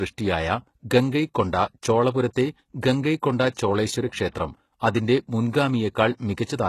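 From start to finish the speech carries plainly audible codec damage whose character points to HE-AAC compression, likely at a very low bitrate, which fits roughly 16 kbps. The upper band is synthesised by spectral band replication rather than coded, so sibilants come out gritty and metallic, with treble that sounds detached from the lower harmonics. Nothing is present above about 12.3 kHz.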